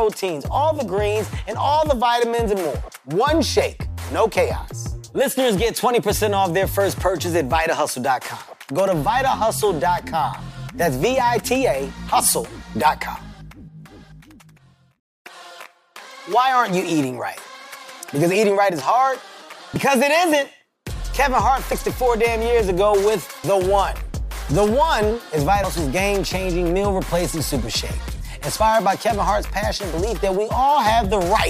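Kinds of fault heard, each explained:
Dropped buffer (overrun): five forward jumps at 19.76, 21.72, 23.44, 25.64 and 28.6 s, each skipping a few tens of milliseconds (nearer a tenth of a second at 25.64 s). The likely cause is samples overwritten before being read, with the remaining audio spliced together.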